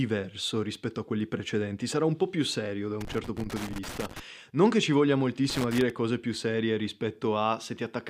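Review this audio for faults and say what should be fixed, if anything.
Loose connector crackle at 3.01–4.20 s and 5.50–5.90 s: a worn contact chops the speech, showing as ragged waveform dropouts and broadband vertical streaks on a spectrogram. Clean or replace the connector and secure the cable so it cannot move.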